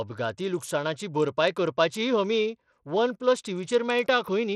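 A speech recording that has likely passed through Bluetooth SBC compression at a small bit pool, with the coarseness pointing to a rate of about 80 kbps. Under that budget the encoder starves its upper sub-bands and quantises the rest roughly, so across the whole clip the treble thins out and flickers, while a gritty, plainly audible grain and aliasing sit on top of the sound from start to finish.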